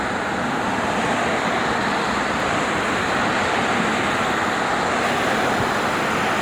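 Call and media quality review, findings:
Timecode bleed, 5.03 s to end (6.42 s). Linear timecode at 25 frames per second leaking from an adjacent track or cable into the audio path. Square-wave code toggling near 1 and 2 kHz gives a chirping warble behind the sound, roughly 15 dB down.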